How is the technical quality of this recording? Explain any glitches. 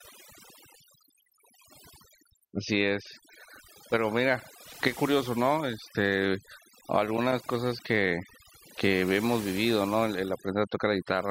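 The quality is compromised by overdone noise removal, audible from start to finish. The background drops and breaks up into twinkling specks. An overly aggressive noise reducer is gating frequency bands near its noise estimate, stripping quieter speech detail along with the noise.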